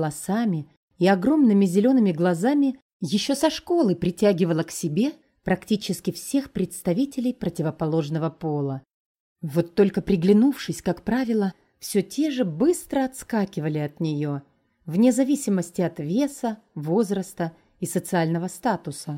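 No technical faults are audible.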